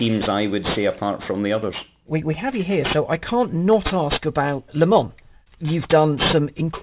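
Throughout the speech, sibilants sound gritty and metallic, with stray false tones, and the spectrum runs hard up to 4 kHz. This is aliasing: the sample rate was lowered, which fits a drop to 8 kHz, without filtering first, so content above 4 kHz folded back, roughly 10 dB below the signal.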